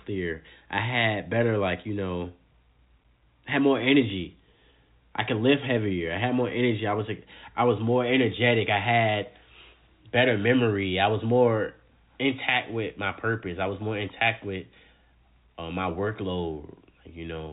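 No technical faults occur at any point in this speech, which is carried over ordinary G.711 telephone coding with nothing above about 3.8 kHz.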